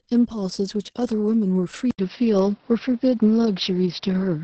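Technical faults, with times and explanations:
Throughout: Opus voice compression at a low rate; speech comes out muffled, hoarse and slightly robotic, with nothing above 8.6 kHz.
1.91 to 4.44 s: input switched to a poorer device, likely; after an 80 ms silence the band drops to 5.8 kHz, level shifts about 5 dB, new background noise appears.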